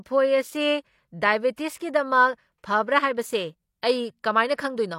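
At 1.55 s a pre-echo appears, lasting until about 1.58 s. A short hiss arrives just before a sharp attack in the speech. The smear spans about 23 ms. The cause is a transform codec coding the whole block at once. The attack sits late in that block. The coding noise is sized for the loud attack, yet it fills the quiet stretch ahead of it too. The onset loses its crispness and sounds softened.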